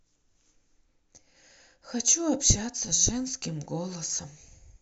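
Nothing in the speech stood out as a fault on listening.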